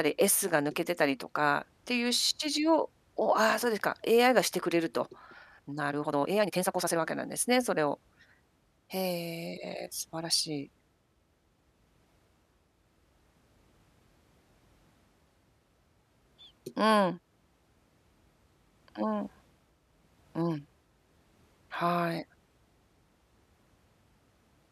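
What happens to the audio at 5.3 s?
Right around there the speech hits a time-stretched section, running from about 5.24 s to 7.00 s. The pace suddenly jumps to roughly 1.86 times normal speed, yet the pitch doesn't rise at all. That's likely software squeezing the passage to fit a shorter slot, keeping pitch by chopping out short slices of the waveform. You hear it as a rushed stretch before things snap back to normal timing.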